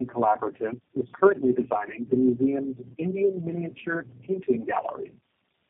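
Throughout, tandem speech coding roughens and muffles the speech: three low-rate codecs in a row each re-encode the last one's output. A spectrogram shows nothing above 3.5 kHz, with smeared, warbly formants.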